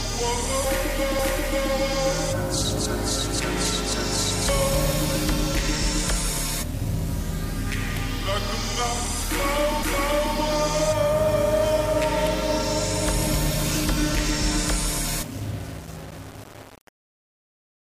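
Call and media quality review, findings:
Grainy, signal-following distortion throughout; quiet passages sputter or drop out. Likely low bit depth without dither, fitting about 5-bit rounding. Waveform shows coarse steps; spectrogram shows broadband grit about 20 dB down.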